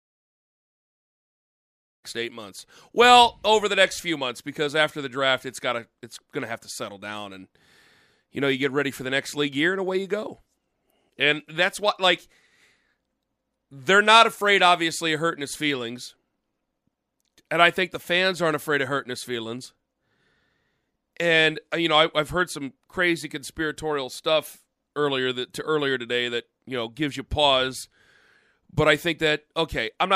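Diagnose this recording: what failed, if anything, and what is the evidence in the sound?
Nothing failed: the sound gives no evidence of a fault, only a smooth fade-in over the opening that is complete by about 2.06 s.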